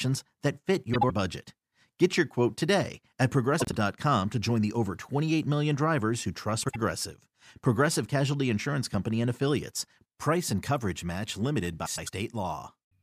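Frames out of order hit this speech at 0.94, 3.60, 6.63 and 11.86 s. Two adjacent blocks, each about 50 to 100 ms, swap places. Each sounds like a garbled flutter.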